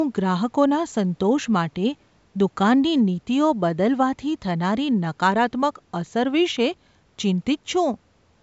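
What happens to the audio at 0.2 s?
Nothing goes wrong at 0.2 s: the speech passes through intact there, with only the ordinary call microphone processing shaping it.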